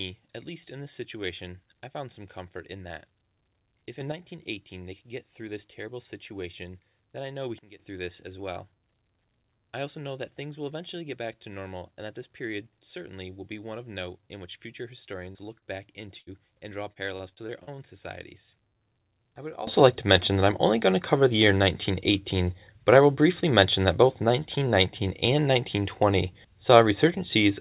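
At 4.01 s a sudden gain jump lifts the level by about 6 dB, and at 7.59 s another drops it by about 15 dB. Each change is likely a gain setting applied between two samples without a ramp. The background noise steps with the speech, which tells these apart from a speaker simply getting louder or softer.

Short concealed packet loss occurs at 15.32 s and 15.59 s. Each time about 30 ms of audio never arrived, and the receiver patched the hole by extending the preceding sound before blending back. These are brief smears or wobbles, too short to drop more than a fragment.

A burst of packet loss from 16.18 to 16.30 s, just before "and draw", removes about 90 ms. The concealment holds the last sound and fades it as the gap lengthens, so a buzz or hiss dies away and the speech resumes with a piece missing. It is longer than the short losses.

After "and draw", from 16.93 to 17.76 s, repeated packet loss (robotic sound) sets in. 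Six gaps, the longest 37 ms, arrive in quick succession, and about a fifth of the stretch is patched. The speech turns choppy rather than breaking once.

At 19.67 s, after "I would", a final sudden gain jump of about 19 dB holds to the end. It is likely an unramped gain step, and the noise floor rises with the speech. Throughout, nothing is audible above 4 kHz, which fits a G.711 A-law call path at 64 kbps.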